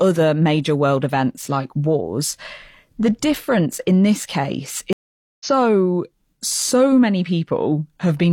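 At 4.93 s the speech cuts out for 476 ms in a stream reconnect. The player rejoined mid-stream at 5.45 s, resuming about half a second further on.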